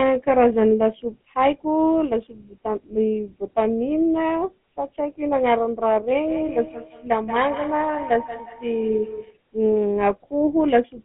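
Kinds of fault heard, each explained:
GSM full-rate codec: The speech has passed through the original GSM full-rate codec, which rebuilds the voice from a vocal-tract filter driven by sparse, regularly spaced excitation pulses. The result is a plainly audible buzzy, gravelly roughness across the whole clip, consistent with a 13 kbps stream. On a spectrogram, energy sits between roughly 150 Hz and 3.4 kHz with nothing above, and harmonics look smeared and grainy rather than cleanly striated.
feedback echo between two devices: From 6.27 to 9.41 s, the speech comes back on itself about every fifth of a second. This is what happens when one device's loudspeaker output is recaptured by a second device's microphone on the same call, which its echo canceller cannot remove. The repeats peak at about 13 dB below the speech and sound thinner and more ringing. On a waveform, each syllable is trailed by smaller copies spaced at that interval, shown as repeated ghost bands on a spectrogram.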